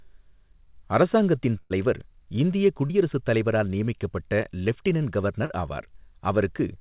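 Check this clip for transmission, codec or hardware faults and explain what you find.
There are three packet-loss dropouts here, all on a call line where nothing gets through above 4 kHz, which fits a narrowband G.711-style codec.

Burst of packet loss, 1.6 to 1.72 s: about 100 ms never arrived, so the receiver stretched the last sound and faded it out, then jumped ahead with that stretch missing.

Short concealed packet loss at 2.86 to 2.91 s, just before "தலைவரால் நியமிக்கப்பட்ட லெஃப்டினன்ட்", and at 5.45 to 5.52 s, right after "தலைவரால் நியமிக்கப்பட்ட லெஃப்டினன்ட்": around 40 ms dropped each time. It was patched by extending the previous sound, so you hear a quick smear or wobble.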